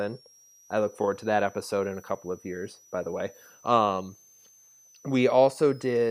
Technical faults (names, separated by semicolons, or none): switching supply whistle